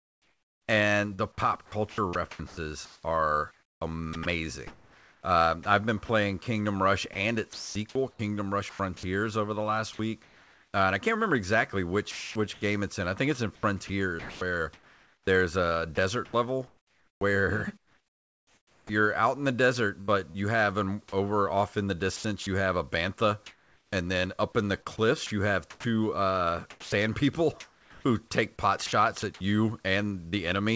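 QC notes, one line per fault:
0.00–10.73 s, sound chopped by the voice detector: the speech repeatedly drops out to a flat synthetic hiss, about 3.3 s of it in total, likely from the sender's voice detector gating quiet syllables and word edges.
12.11–20.36 s, sound chopped by the voice detector: the same choppy gating, with about 3.0 s replaced by comfort noise.
22.16–30.34 s, sound chopped by the voice detector: lighter chopping, with about 1.7 s filled in. The band above 8 kHz is empty on the call path throughout.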